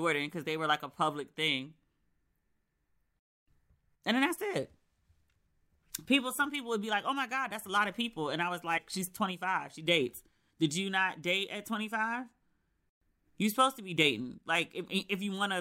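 Compressed frames skipped at 8.77–8.79 s, just after "people and I was": about two 26 ms frames, roughly 50 ms, vanish, leaving a brief smeared blip.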